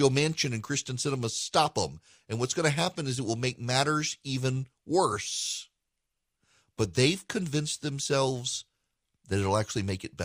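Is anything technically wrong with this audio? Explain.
No, the speech signal shows no technical faults anywhere in the recording.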